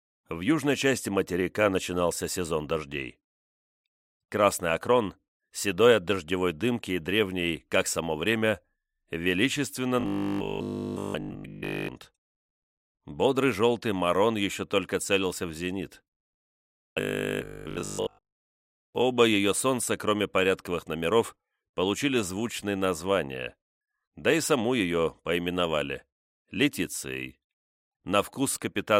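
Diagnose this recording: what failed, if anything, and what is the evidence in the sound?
Robotic sound from repeated short buffers occurs at 10.00–11.90 s and 16.65–18.95 s. A rigid 50 Hz buzz replaces the first stretch entirely and most of the second. It likely comes from driver buffer starvation replaying 20 ms blocks. A spectrogram shows harmonics every 50 Hz, and the waveform shows identical repeating cycles.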